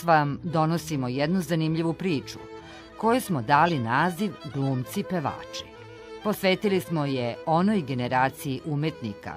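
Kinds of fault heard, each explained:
Corrupt frame decoded: damaged bits in one compressed frame were decoded as if valid, so misread gains and codes put energy at the wrong frequencies. At 3.66 to 3.72 s, a burst of about 60 ms (roughly one frame's length) gives a brief error peaking around -15 dBFS. Unlike a concealed lost frame, the sound isn't smeared; spurious energy is added, and unlike a click it lasts a full frame.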